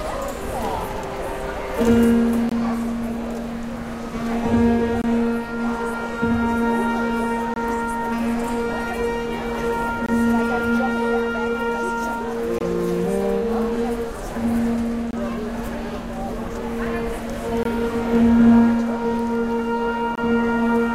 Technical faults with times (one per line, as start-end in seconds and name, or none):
2.49-2.52 gap between chunks
5.02-5.04 gap between chunks
7.54-7.56 gap between chunks
10.06-10.09 gap between chunks
12.59-12.61 gap between chunks
15.11-15.13 gap between chunks
17.63-17.65 gap between chunks
20.15-20.18 gap between chunks